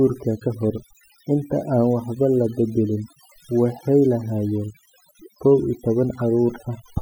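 Right from the start and all the way through, this speech has overdone noise removal. The denoiser was pushed far too hard, so any frequency band sitting close to its noise estimate gets pulled way down or switched off, and the softer parts of the voice get caught along with the noise. You hear it as a near-silent background full of little twinkling specks.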